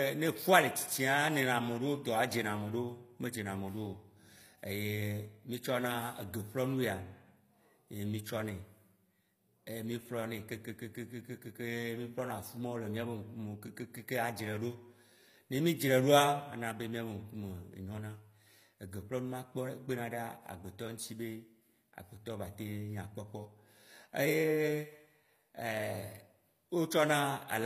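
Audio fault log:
throughout, HE-AAC compression: the speech keeps a bright top that cuts off sharply at 15.5 kHz, with gritty, lispy s sounds. The likely cause is spectral band replication, which rebuilds treble from copied lower bands, consistent with a bitrate near 24 kbps.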